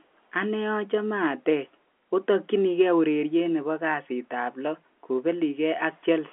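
Nothing goes wrong anywhere in this speech, which comes over a G.711 telephone line with the usual narrow band, its content sitting roughly between 250 Hz and 3.4 kHz with nothing above about 3.8 kHz.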